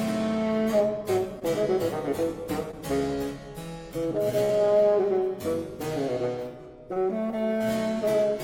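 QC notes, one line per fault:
1.39–1.43 s, 2.71–2.75 s, 6.93–6.98 s: short concealed packet loss. About 20 ms never arrived each time, so the receiver extended the preceding sound and blended back, leaving a brief smear or wobble.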